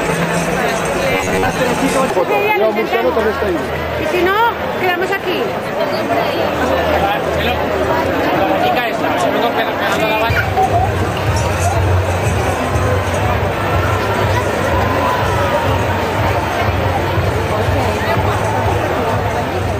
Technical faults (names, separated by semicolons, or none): robotic sound from repeated short buffers